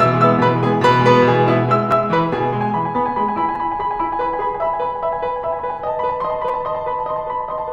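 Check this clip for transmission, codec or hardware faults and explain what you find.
Three short glitches in the music come from a repeated buffer fault. At 1.92 s, 3.55 s and 6.49 s there is a short click or brief buzz, the second longer than the first and the third longest. Each time, new audio arrived late and the device replayed its last 5.8 ms block, once, twice and three times respectively, with a hard join at each repeat. That block length fits a 256-sample buffer. The music resumes with essentially nothing lost.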